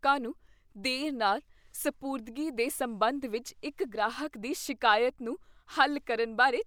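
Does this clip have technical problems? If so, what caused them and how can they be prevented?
No, this clip has no technical problems, so there is nothing to trace or prevent.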